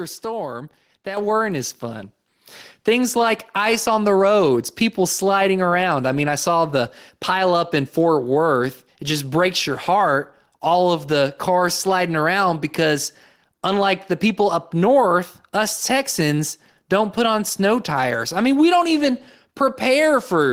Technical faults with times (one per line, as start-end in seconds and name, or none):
1.17 microphone volume stepped up
2.19 microphone volume stepped up